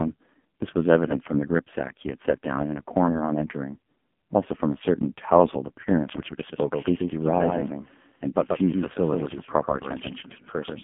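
A speech recording squeezed through the AMR narrowband mobile codec at a very low 5.15 kbps. It sits in a 150 to 3400 Hz telephone band with nothing above 3.5 kHz, and the voice comes out heavily buzzy and synthetic. Plain band-limiting would be dull but clean; this sounds built from pulses. From 6.15 s to the end there is a doubled audio track: a full-band second copy roughly 150 ms late and about 5 dB quieter. It starts abruptly, with no decaying repeats or room colour, so it is not echo or reverberation. The likely cause is a second, slower capture path mixed in.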